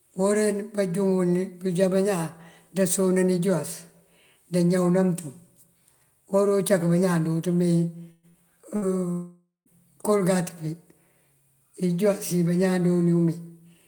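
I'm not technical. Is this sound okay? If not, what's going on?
No. Around 8 seconds the speech breaks up three times, at 8.11 to 8.26 s, 8.29 to 8.37 s and 8.76 to 8.85 s. Each is a burst of packet loss: pieces of audio never arrived, so the receiver stretched the last sound into a brief buzz or hiss. About 60 to 120 ms of speech is missing each time.

From 9.12 to 9.69 s the sound smears into a fading buzz or hiss, goes silent for the last 0.14 s or so, then resumes with roughly half a second of speech gone. This is likely a long network dropout, where the connection stalled and nothing came through.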